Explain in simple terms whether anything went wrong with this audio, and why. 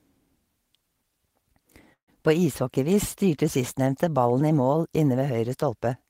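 A call audio freeze happens from 1.93 to 2.10 s in this speech. The sound hangs, trails off, and then goes quiet for about a tenth of a second before the talking resumes. The likely cause is that pieces of the call arrived late, so the receiving end ran out of audio and stretched what it had. When the delayed pieces came in, the speech picked up where it stopped. Nothing was lost, but everything after that point runs about 0.14 s later.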